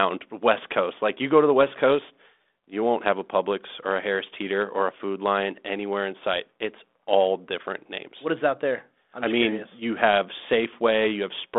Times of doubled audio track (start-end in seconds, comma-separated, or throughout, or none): none